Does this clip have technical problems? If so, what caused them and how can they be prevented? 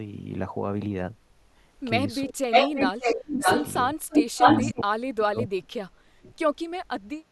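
Yes. Speech suppressed in double talk occurs at 2.25–2.73 s, 2.91–3.5 s and 4.63–6.32 s, with dips of roughly 35 to 40 dB. The likely cause is an echo canceller that couldn't separate near speech from loudspeaker echo and attenuated both. On a waveform the envelope collapses, and on a spectrogram the upper bands thin out or vanish. Better double-talk detection, or a headset, prevents it.

Echo leak appears at 2.51–3.14 s, 3.35–3.73 s and 4.09–4.69 s as a delayed copy of the speech trailing by 576 ms, around 5 to 10 dB relative to the speech. It is likely loudspeaker sound that the far end's canceller failed to remove. A spectrogram shows repeated harmonic patterns offset by that delay. Lowering loudspeaker volume or using headphones prevents it.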